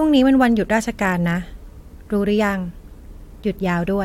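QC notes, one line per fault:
No faults found for QC notes.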